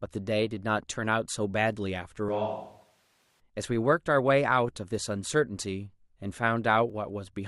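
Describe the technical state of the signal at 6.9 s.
At 6.90 s the speech has an overlap between stream segments: two segments' time stamps collide, and trimming the overlap removes a few milliseconds of sound that was never duplicated. It is heard as a brief click or tiny skip. The waveform shows an abrupt step, and the spectrogram shows a thin vertical broadband line.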